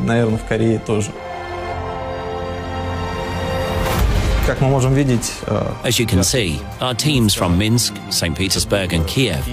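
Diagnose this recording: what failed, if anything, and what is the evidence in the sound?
Nothing failed; no fault is audible anywhere.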